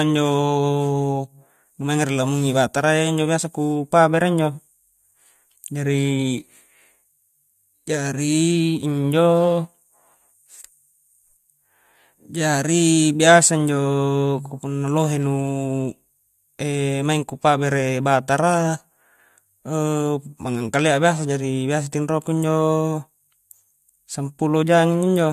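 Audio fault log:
No audible faults detected.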